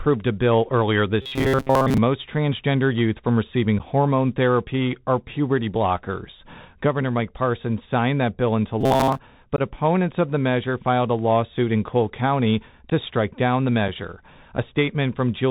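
Speech runs through a Bluetooth CVSD headset codec for the whole 15 seconds, and the codec damage is plainly audible. The sound is band-limited and scratchy, which points to the 64 kbit/s one-bit delta modulation of a narrowband headset link. Its adaptive step cannot keep pace with loud, bright sounds, so sibilants fray and a granular hiss sits beneath everything. On a spectrogram the energy stops sharply at about 4 kHz, with a grainy noise floor filling the band below. Robotic sound from repeated short buffers appears twice. It runs from 1.22 to 1.98 s, starting just after "a bill earlier" and ending before "most transgender youth from", and again from 8.81 to 9.18 s. In both spans the speech becomes a stiff metallic buzz at 133 Hz, with most of the audio replaced by repeats. That rate fits a segment of roughly 7.5 ms being replayed while fresh audio is dropped, likely because new buffers arrived too late. 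A spectrogram shows rigid horizontal harmonics spaced 133 Hz apart, and the waveform shows one short shape tiled over and over. Unconcealed Bluetooth headset packet loss punches four brief holes with hard, abrupt edges. The first is at 3.79 s, after "transgender youth from receiving" and before "hormone therapy or puberty", and lasts about 11 ms. The second runs from 9.56 to 9.61 s, about 19 ms. The third is at 12.90 s, just before "to strike down the", about 11 ms. The fourth is at 13.88 s, about 7.5 ms. Each fits a few lost packets replaced by silence rather than patched over, so the waveform drops to a flat line with abrupt walls and the spectrogram shows thin vertical gaps.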